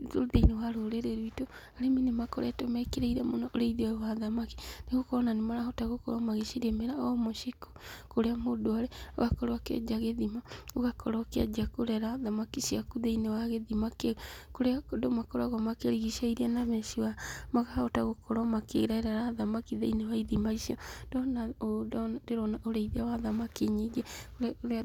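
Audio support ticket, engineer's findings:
Engineer's findings: no audio fault found in this speech clip for the support ticket.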